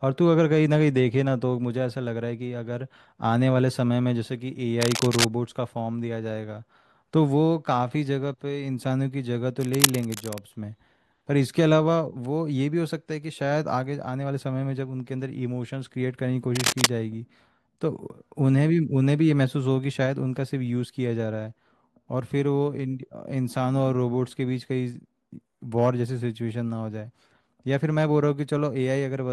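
Cable scratch noise appears three times: from 4.81 to 5.26 s, from 9.60 to 10.38 s, and from 16.55 to 16.91 s. Each burst is a dense, ragged crackle roughly as loud as the speech itself, heard as scratching laid over the talker for under a second. The likely cause is a worn cable or connector being moved, its contact resistance flickering rapidly and injecting irregular noise into the signal.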